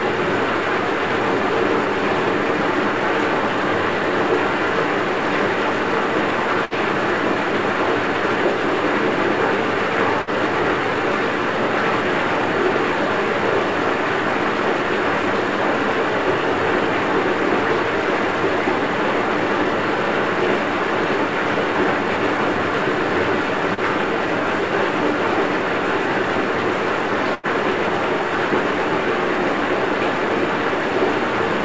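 At 6.65 to 6.74 s and 10.22 to 10.30 s, a burst of packet loss makes the last sound continue as a fading buzz or hiss for about 55 ms. About 60 ms of audio is then skipped, so the sound resumes further along rather than picking up where it stopped.

At 23.74 to 23.80 s, a short concealed packet loss fills roughly 36 ms with a brief smear that blends straight back. It is shorter than the bursts, with only about 30 ms missing.

At 27.34 to 27.46 s, the longest burst of packet loss holds a decaying tail for 87 ms before the sound jumps ahead, having lost about 90 ms.

Throughout, on the call path, there is nothing above 8 kHz, which points to a wideband call codec such as G.722.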